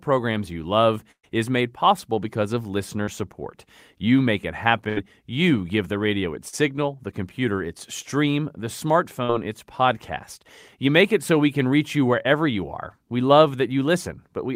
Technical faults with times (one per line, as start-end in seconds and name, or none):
1.11-1.25 burst of packet loss
3.03-3.09 short concealed packet loss
4.89-4.98 burst of packet loss
6.48-6.54 short concealed packet loss
9.24-9.31 short concealed packet loss
12.23-12.26 short concealed packet loss